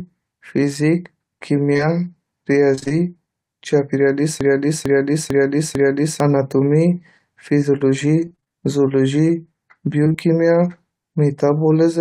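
A speech recording with three kinds of network and playback fault. Short concealed packet loss hits from 1.73 to 1.81 s, as two back-to-back holes of about 20 ms each. The receiver patched them by extending the preceding sound, leaving a brief smear.

Repeated packet loss, heard as robotic sound, occurs at 2.75 to 3.02 s, 8.25 to 8.52 s and 10.04 to 10.20 s. Holes of up to about 25 ms keep arriving. Concealment fills roughly half of each stretch, so the speech turns choppy.

A broken-record loop runs from 4.41 to 6.20 s. A fragment of about 0.45 s plays four times back to back, and the speech meant for that span is lost. The likely cause is a stalled player or stream resending its last buffered piece.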